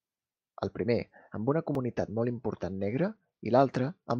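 Speech, with a Bluetooth SBC bit pool drop from 2.70 s to the end: treble dulls and gritty quantisation noise rises, which fits the bit pool falling from 28 to 11, near 90 kbps. A plain low-pass would dull without the added grit.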